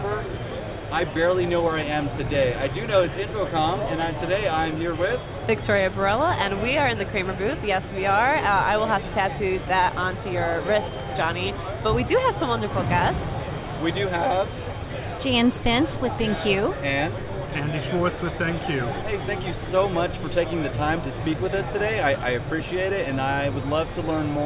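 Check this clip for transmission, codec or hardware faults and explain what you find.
I checked this clip and found no faults to explain.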